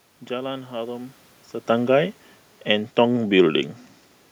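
Speech with some room background and a level shift around 1.5 s where the talker moves relative to the microphone, both part of the acoustic scene, with no technical fault found in the signal chain.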